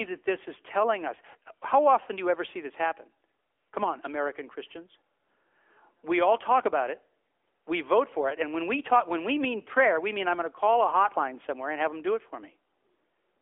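AMR narrowband mobile codec damage runs from start to finish. The speech has been squeezed through a phone-line band of roughly 300 Hz to 3.4 kHz, with nothing at all above 3.6 kHz, because the codec samples at 8 kHz and rebuilds the voice from a vocal-tract model and a few excitation pulses per 5 ms subframe. The plainly audible coding artefacts suggest a mid-range setting of around 10.2 kbps, heard as a boxy, synthetic quality.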